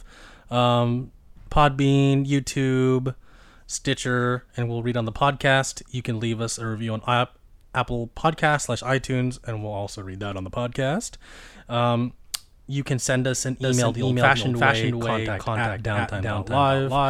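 Speech, with a doubled audio track starting abruptly at 13.63 s, right after "can send us an", and running to the end. A second, full-band copy trails by roughly 0.4 s at about equal level, with no decay or room colour. It was likely captured twice through a slower path or left as two misaligned copies in an edit. On a spectrogram, every syllable pattern repeats as an identical shifted twin; the waveform shows overlapping duplicate envelopes.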